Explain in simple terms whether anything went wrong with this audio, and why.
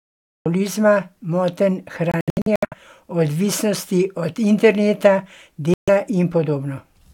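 Yes, two things went wrong. The first is a cut-off start. The recording opens with dead silence until 0.46 s, and then the speech appears already in progress, with no natural build-up. That sudden jump from nothing into the middle of a sound is what tells it apart from a speaker who simply paused before talking. A quiet pause would still carry faint room sound, but here the recording just began too late.

The second problem is gaps that are likely Bluetooth dropouts, where bits of audio failed to reach the headphones in time and were thrown away. Between 2.12 and 2.74 s the sound keeps stuttering out in short holes, about a third of a second lost in total, the longest gap roughly 70 ms. At 5.74 to 5.90 s, right after "od interneta", it goes silent again for about 0.14 s. Each time, the speech comes back further along, as though it kept playing during the silence, which sets this apart from an edit that splices the speech back together.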